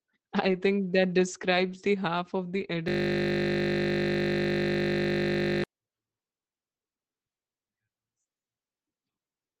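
At 0.43 to 0.61 s, 1.53 to 1.75 s (just before "the half of") and 2.55 to 2.69 s (just after "the half of"), the sound turns briefly rough and grainy without ever dropping out. Each is a lost packet rebuilt from error correction: packets went missing, and the decoder played the lower-quality copies carried in the following packets. The rebuilt stretches last 100, 120 and 80 ms. On a spectrogram these appear as smeared, noisier patches with blurred harmonics and no silent gap. Above them the band stops at 8 kHz, as it does throughout the Opus call path.

From 2.88 to 5.64 s a system hang loop takes over. The host froze while the audio hardware kept replaying one 20 ms piece of its ring buffer, which fits a 20 ms buffer, about 138 times. At a 50 Hz repeat rate this is a steady, flat buzz rather than a stutter. The waveform shows one identical 20 ms cycle tiled end to end. The spectrogram shows rigid horizontal lines spaced 50 Hz apart, with no movement until the loop stops.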